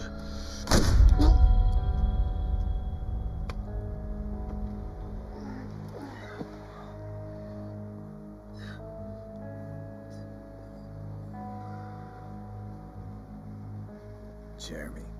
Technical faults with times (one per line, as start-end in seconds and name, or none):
0.00-15.19 channel delay (comb filtering)